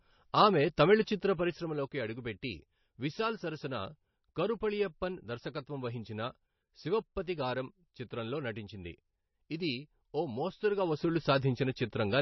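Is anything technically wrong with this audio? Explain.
Yes, two problems. Throughout, the speech sounds watery and swirly with nothing above 5.9 kHz, likely heavy MP3 compression at a low bitrate of around 27 kbps, starving the treble and dropping weak detail frame to frame.

There's also zipper noise from 1.16 to 1.84 s, after "ఆమె తమిళ" and before "అడుగుపెట్టి విశాల్ సరసన", and again from 10.68 to 11.2 s after "ఇది ఓ". The level drops about 10 dB the first time and rises about 10 dB the second, in unsmoothed 1 dB steps roughly 30 times a second, so each jump adds a tick and you hear a zipping buzz.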